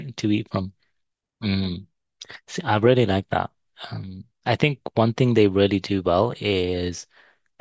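No technical faults can be heard at any point in the speech recording.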